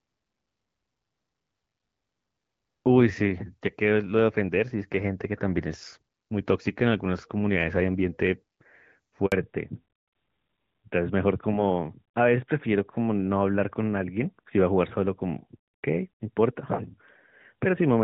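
At 9.26 s there's a handover gap. The call jumps networks, no speech arrives for 60 ms, and the sound drops to silence until 9.32 s. From 9.32 s on, it's a fallback to narrowband. Everything above 4 kHz disappears, so the voice turns duller and rougher than the clear HD Voice before it, which sounds like a switch from AMR-WB to AMR-NB.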